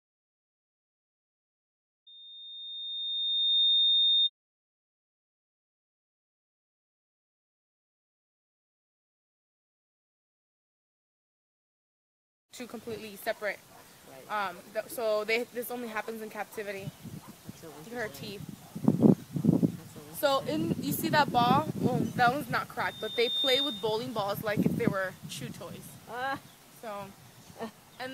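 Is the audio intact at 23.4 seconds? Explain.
No. A loudspeaker feedback squeal runs from 22.81 to 24.06 s: a 3.6 kHz tone swells over roughly half a second to about 5 dB above the audio, because the microphone picks up its own loudspeaker and loop gain exceeds one at that frequency.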